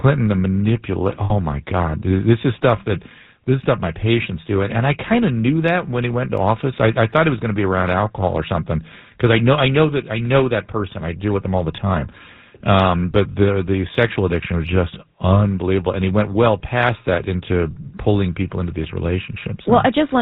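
Speech runs through the GSM full-rate codec throughout, giving a plainly audible buzzy, gravelly roughness that fits a 13 kbps GSM stream. A spectrogram shows nothing above 4 kHz. Lost GSM frames at 1.24–1.32 s (60 ms, three 20 ms frames) and 13.32–13.35 s hold the last sound as a metallic ring. In the spectrogram those spots appear as frozen, smeared harmonics.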